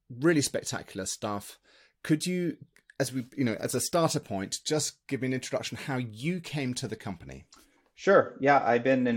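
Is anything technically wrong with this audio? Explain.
No, nothing technically wrong turns up here; this bit of speech sounds just as it should all the way through.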